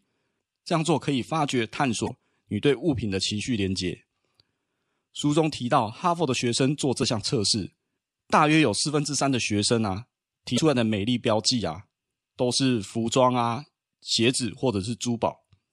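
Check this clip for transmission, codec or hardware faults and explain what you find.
There's one problem in this speech, and it happens three times: damaged data in the compressed stream. You'll catch it at 2.05–2.10 s, 6.99–7.03 s and 10.54–10.59 s, each burst about 40 ms long. At those spots some of the encoded bytes are corrupted, so the decoder can't make sense of the frames, loses sync and hunts for the next good frame header. What reaches your ear is a quick chirp or squawk cutting across the speech.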